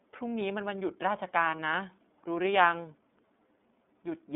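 Speech that sounds narrow, slightly rough and synthetic throughout, with nothing below about 200 Hz or above 3.6 kHz and plainly audible coding damage. This is the iLBC codec: each frame's excitation is coded independently at a low rate, which fits the 13.33 kbps mode with 30 ms frames. From 1.56 to 1.59 s, a brief held, faintly buzzy vowel replaces the speech before it snaps back cleanly. This is a lost iLBC frame: the decoder filled the 30 ms gap by repeating the last pitch cycle mixed with noise, and the next self-contained frame restored the speech at once.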